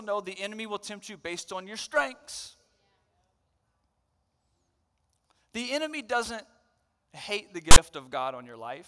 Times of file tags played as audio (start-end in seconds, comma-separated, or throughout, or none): 7.71-7.77